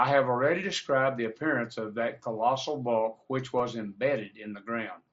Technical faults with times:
3.58 concealed Bluetooth headset packet loss

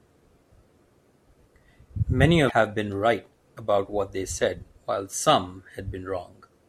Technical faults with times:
2.47-2.52 damaged data in a compressed stream

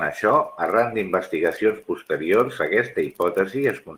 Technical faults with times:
none

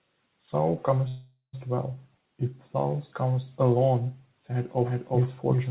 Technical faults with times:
1.08-1.55 call audio freeze
4.84-5.70 doubled audio track

